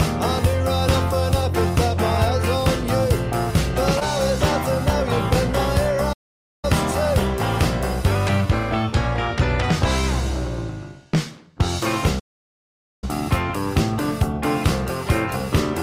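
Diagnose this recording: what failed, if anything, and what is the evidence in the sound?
A brief smear at 3.99 to 4.03 s is short concealed packet loss on the network. About 20 ms never arrived, so the decoder stretched the preceding sound across the gap.

The sound drops to silence at 6.13 to 6.65 s and again at 12.19 to 13.04 s. That is a playback stall, likely the player running out of data or its thread being blocked.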